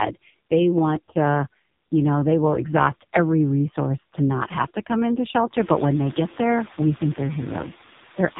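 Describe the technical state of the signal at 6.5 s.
At 6.5 s, noise suppressor artifacts are present, as they are throughout. The suppressor pulls down frequency bands it judges to be steady noise, frame by frame, by about 11 dB. The room noise, which rose by about 14 dB near 5.5 s and sits about 20 dB below the speech, dips in the gaps and swells back under the talking.

The AMR narrowband mobile codec also runs through the whole clip. Its vocal-tract model is driven by sparse pulses, so the speech sounds buzzy and synthetic, and the coding damage is heavy enough to suggest a very low bitrate near 5 kbps. Nothing passes above 3.8 kHz. That hard bandwidth ceiling and the constant buzz distinguish it from the suppressor's noise-dependent dips.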